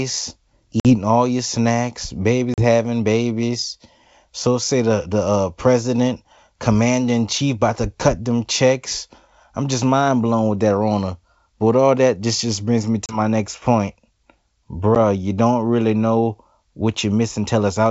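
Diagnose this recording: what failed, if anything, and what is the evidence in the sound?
Network stage: packet loss on an ADPCM call. There are hard-edged silent holes at 0.80–0.96 s (before "all your snacks"), 2.54–2.65 s, 13.06–13.19 s (between "just just brings me" and "next point") and 14.95 s. After each hole the sound returns slightly distorted while the decoder's predictor and step size re-converge. This separates it from concealed loss, which fills gaps smoothly.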